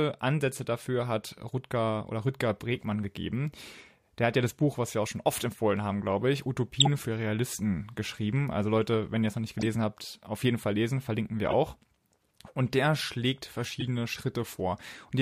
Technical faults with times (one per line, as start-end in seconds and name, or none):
6.80-6.88 corrupt frame decoded
9.59-9.66 corrupt frame decoded
11.48-11.54 corrupt frame decoded
13.80-13.85 corrupt frame decoded